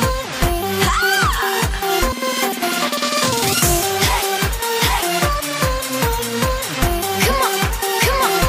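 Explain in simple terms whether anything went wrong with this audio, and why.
Nothing went wrong here: the signal holds steady throughout, with no dropouts, gaps, distortion, glitches or other technical problems to hear.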